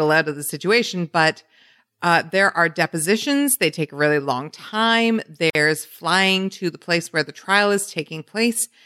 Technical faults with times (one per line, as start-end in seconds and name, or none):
5.50-5.55 gap at a join of encoded pieces